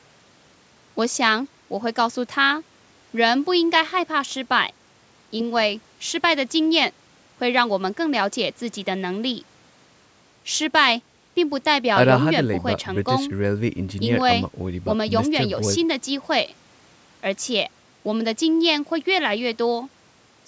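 No technical faults are audible.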